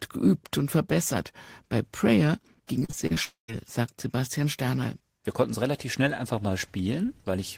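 Repeated packet loss (robotic sound) runs from 2.79 to 3.18 s. Five short holes, the longest 37 ms, were patched by stretching the preceding sound, so about a third of that span is synthetic fill. The result is choppy speech with fragments missing.

A long network dropout likely follows from 3.24 to 3.5 s. Roughly a quarter-second of speech is gone. The gap is bridged first by a fading continuation of the last sound, then by about 120 ms of silence, before the audio resumes.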